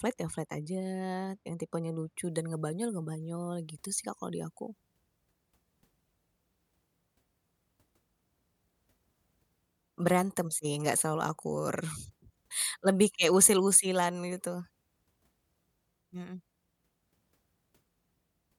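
From 2.17 s, just after "yang tipenya", to the end, pre-emphasis is left on: a 50 µs FM treble boost was never undone, lifting 10 kHz about 10 dB above 1 kHz. The speech sounds thin, bright and sibilant; a spectrogram shows uniformly brightened upper bands.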